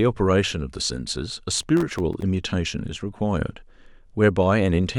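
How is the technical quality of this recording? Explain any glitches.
The recording has one glitch: processor overload crackle from 1.52 to 2.22 s. The processor misses many audio deadlines in a row, and each miss leaves a brief hard-edged silent gap. The gaps point to a very short buffer, under a millisecond. Together they sound like gritty tearing over the speech. Unlike a single dropout, this is a dense cluster that stops once the load passes.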